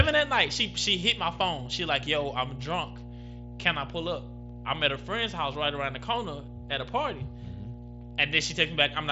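Mains hum runs throughout the speech, a steady 60 Hz tone about 15 dB below it, leaking in from the power line. Unlike broadband rumble, it holds one fixed, pitched note.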